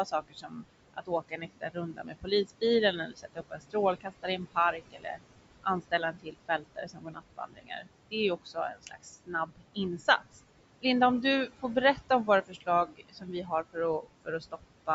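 Noise suppressor artifacts run through the whole recording. The suppressor works frame by frame, pulling down the bands it judges to be steady noise by about 21 dB. The room noise, sitting about 13 dB below the speech, sinks in the gaps between words and comes back up underneath them.

Speech cut by the noise suppressor follows the same mechanism, with the suppressor mistaking parts of the speech for noise and turning them down with the background. Soft consonants, word endings or quieter phrases sound swallowed or faint. This happens from 0.05 to 2.62 s and from 2.93 to 5.19 s, with roughly a second affected in each span and drops of up to about 21 dB. It happens again from 5.63 to 10.28 s, with around two seconds affected and drops of up to about 21 dB. The last span runs from 11.95 s to the end, with drops of up to about 20 dB. The call microphone processing's high-pass filter removes the lowest bass, as expected.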